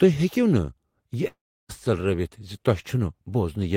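At 1.27 s the speech cuts out until 1.71 s, likely a long network dropout. The last sound lingers as a fading buzz, then near-silence. About 0.42 s is lost.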